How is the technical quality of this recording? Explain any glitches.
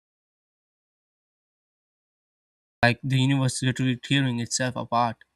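The recording has one clear glitch at the start. From the opening until 2.83 s there is an audio dropout to silence: the input was likely lost, and zeros were written instead. It sounds like dead, room-tone-free quiet, shown as a flat waveform and an empty spectrogram before the speech abruptly begins.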